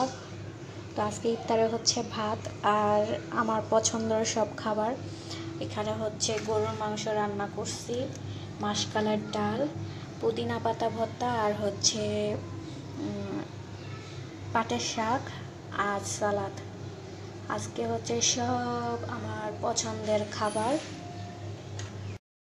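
Cut-off end at 22.17 s: the final buffers were never written, so the sound stops mid-event and drops straight to digital silence, with no decay.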